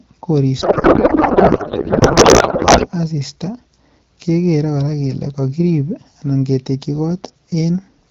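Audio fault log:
0.61–2.88 s, codec payload misread: the speech is replaced by garbled noise and warble that barely tracks it, as the decoder reads octet-aligned AMR frames as if bandwidth-efficient, shifting every field. Clear AMR-WB speech, consistent with 12.65 kbit/s, returns afterwards.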